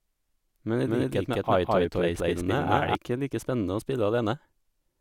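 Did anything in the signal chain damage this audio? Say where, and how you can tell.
Yes. A doubled audio track runs from 0.85 s to 2.95 s, starting just before "ikke like spennende å". The likely cause is the signal being captured twice, once through a slower monitoring or routing path in the driver and buffer stage, or an edit that left two out-of-step copies. A second full-band copy trails the speech by around 200 ms at roughly equal level, with no decay or room colour, and it cuts in and out abruptly.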